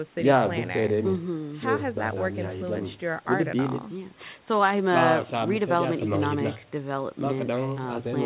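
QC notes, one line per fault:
No faults heard.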